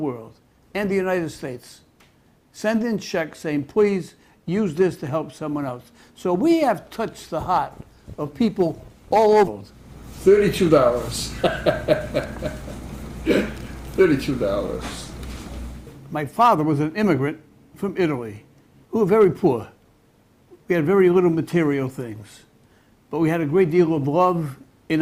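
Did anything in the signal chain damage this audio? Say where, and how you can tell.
Yes. At 9.47 s about half a second of queued audio was dropped, in transit or by an overflowing jitter buffer, so the sound skips ahead with no gap, its two sides spliced directly.

Jitter buffer speed-up follows at 10.27–10.91 s (105%), 14.01–14.44 s (114%) and 16.02–17.59 s (106%): the buffer trimmed short pitch-period slices to shed excess delay, so the sound briefly runs hurried at unchanged pitch.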